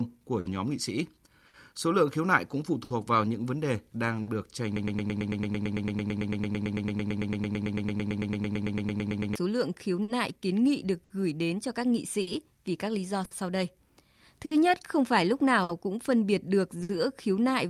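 Throughout the clip there is clock drift between sender and receiver: the sender's audio clock runs roughly 5% slower than the receiver's. Because audio arrives more slowly than it is played out, the jitter buffer keeps draining, and the receiver has to stretch what it holds to avoid running dry. The result is a speech track whose timing never sits quite steady, with small hiccups recurring at uneven intervals.

From 0.18 s to 4.17 s those adjustments show up as repeated timing corrections. The receiver repeatedly inserts short repeated slices to stay in step with the slow sender, adding about 40 ms in total over the stretch and playing it at roughly 99% speed. Each edit is small and all of them lengthen the audio, so the effect is a faintly dragging, unsteady tempo rather than any single obvious glitch.

From 0.40 s to 16.91 s there are scattered short gaps: around fifteen packets went missing or arrived too late, spread out across the clip. 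Each hole was concealed by extending the preceding sound, covering about a second in all, roughly 5% of that span, with the longest patch around 70 ms. The speech stays clear, but brief smears, ticks and hiccups surface now and then.

From 4.76 s to 9.36 s a broken-record loop takes over. The stream stalled, most likely in the player or encoder, and kept delivering the last fragment it held. A 0.11 s slice repeats back to back 41 times, producing a rapid stutter for over four and a half seconds. Whatever speech should have played during that time is lost.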